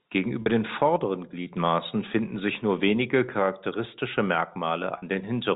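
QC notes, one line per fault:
0.42–0.46 s and 4.98–5.02 s, packet loss with pitch repetition: about 40 ms lost each time, just before "den vorderen" in the first case, which fits two 20 ms packets. The receiver loops the last pitch period and fades it, so the gap is heard as a brief held, buzzy tone rather than a silent hole or click.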